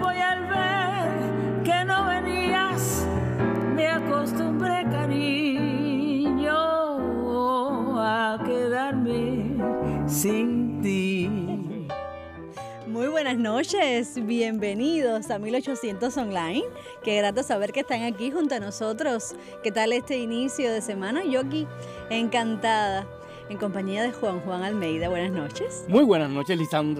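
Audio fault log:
No faults are audible anywhere in this clip.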